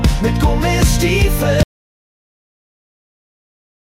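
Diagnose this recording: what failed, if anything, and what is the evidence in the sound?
Audio dropout to silence at 1.63 s, running to the end: the sound cuts off abruptly into silence with no room tone, likely from lost input upstream of the recorder.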